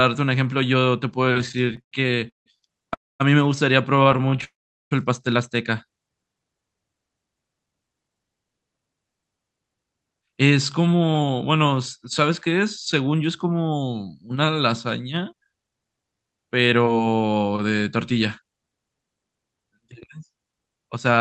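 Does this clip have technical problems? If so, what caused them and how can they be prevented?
Yes, there are a few. There are two stretches of repeated stalls (stutter), at 1.25 to 2.48 s and 3.96 to 4.44 s. Packets kept arriving late, so the jitter buffer ran dry over and over. In the first run that happened 18 times, with 423 ms stretched out, the longest gap 165 ms, and about 35% of that span concealed. The second run had 10 gaps, 116 ms in total and none longer than 22 ms. Nothing is lost, but it drags and stutters. A larger or more adaptive jitter buffer, plus fixing whatever congests the link, would prevent it.

There are two call audio freezes, at 2.94 to 3.22 s and 4.44 to 4.93 s. They're likely down to packets being held up in transit, emptying the buffer entirely. The receiver bridged 260 ms and then 467 ms, and most of that, 240 ms and 400 ms, fades to silence before the sound resumes where it stopped. 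Giving the call a steadier, prioritised network route would stop these holds.

From 7.28 to 13.15 s there's a jitter buffer speed-up. The buffer held more audio than it aims for, so the receiver trimmed tiny pitch-period slices again and again, playing at about 110% speed with the pitch unchanged and shedding around 0.7 s. It sounds hurried. Smoother packet delivery, or a gentler catch-up setting, would avoid it.

The Opus call path itself, with its 8 kHz bandwidth, isn't a fault here.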